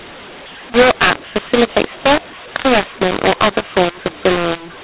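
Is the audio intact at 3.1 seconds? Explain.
No. At 3.1 s, as across the whole clip, the speech was coded with A-law but decoded as mu-law, so the two G.711 laws are mixed up. Each 8-bit code maps to the wrong level, making the speech harsh and distorted and lifting quiet moments into noise.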